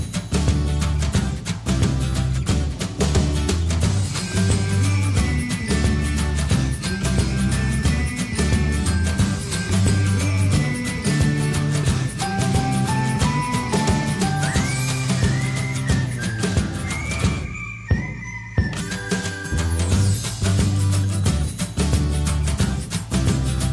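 Nothing in this recording stands out as a technical problem, so there's no fault to walk through here.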